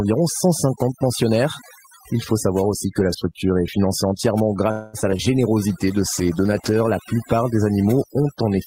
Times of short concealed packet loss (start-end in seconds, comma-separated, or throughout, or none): 5.01-5.21